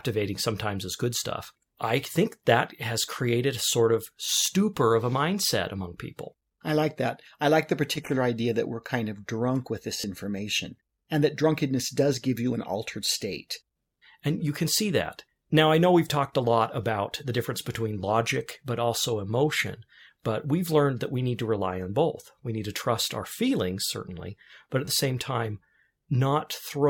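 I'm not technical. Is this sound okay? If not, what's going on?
No. There is a repeated buffer at 10.01 s, between "of drunk with this" and "information and that drunkenness", and again at 24.85 s, just after "feelings certainly but at". New sound arrived late, so the player replayed its last 11-millisecond slice several times, which you hear as a brief stutter or buzz.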